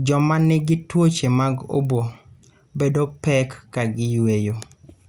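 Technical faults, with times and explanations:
Throughout: resampler restarted on every block. Ticks repeat at a steady 20 Hz, one per 50 ms block, and only while speech is present. Each block is converted alone (consistent with 24 kHz up to 48 kHz), so its edges lack true neighbours. Unlike dropouts, no audio goes missing.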